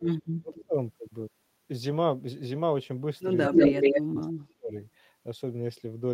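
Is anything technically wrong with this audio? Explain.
Yes, two problems, and they tangle together twice. First, speech suppressed in double talk: from the start to about 0.74 s, and again from 3.5 to 4.74 s, the voice keeps dipping and breaking up. It drops by something like 30 dB in the opening stretch, around half a second of it gutted, and by about 35 dB later, for roughly a second. The likely cause is an echo canceller that couldn't tell this talker apart from the far-end voice coming out of its loudspeaker during overlap, so it squashed everything.

Second, echo leak: a delayed copy of the voice comes back 186 ms late. The first bit is a faint scrap, about 20 dB under the speech, between 0.55 and 0.65 s. The second, from 3.43 to 4.23 s, is much worse: the echo sits roughly 10 dB above the live speech, so the returned copy actually dominates while the real voice is being suppressed. 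That points to a speakerphone whose canceller likely let part of what its microphone picked up slip back into the call.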